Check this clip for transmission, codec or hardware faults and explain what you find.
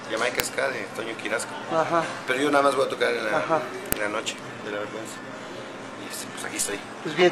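Two kinds of fault are present: two brief noise bursts from an uninitialised buffer, and a sudden quality drop from an adaptive stream switching to a lower bitrate.

Uninitialised buffer, at 0.40 s and 3.92 s: each is a sharp, loud crack of digital noise, the first lasting about 0.67 ms and the second about 1.33 ms. These lengths fit blocks of 32 and 64 samples. The player sent those blocks out before any audio had been written into them, so whatever happened to be left in memory was played as though it were sound.

Adaptive stream at a lower bitrate, from 4.43 s to the end: the audio abruptly turns duller and more processed, with nothing above 12.4 kHz and stronger codec smearing. There is no gap at the switch. This fits a change from a full-rate AAC stream around 96 kbit/s to a 16 kbit/s HE-AAC version, the kind of fallback a player makes when the connection slows and it keeps playing at reduced quality.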